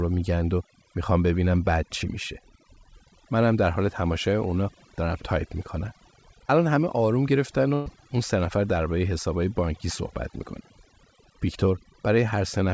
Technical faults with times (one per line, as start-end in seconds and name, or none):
0.00-12.73 overdone noise removal
7.74-7.88 burst of packet loss